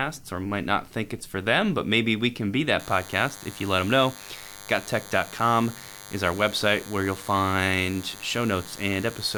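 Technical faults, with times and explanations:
2.80 s to the end, DECT cordless phone buzz: right after "maybe we can be" a thin, steady buzz comes in, about 20 dB under the speech. A nearby DECT unit bursts every 10 ms and the audio circuit rectifies it, giving a harmonic-rich 100 Hz buzz.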